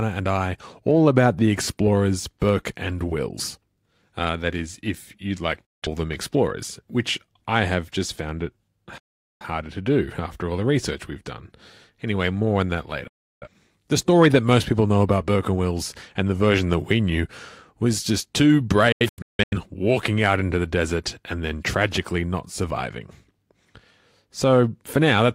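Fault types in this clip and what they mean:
digital broadcast dropout: The receiver lost the signal or got frames that failed their error check, so it muted until valid frames returned, discarding everything sent in between. In this speech the sound cuts out almost instantly, with only a few milliseconds of fade, leaving holes of about 0.17 s at 5.65 s, 0.43 s at 8.98 s and 0.34 s at 13.07 s, then several short gaps scattered from 18.92 to 19.57 s.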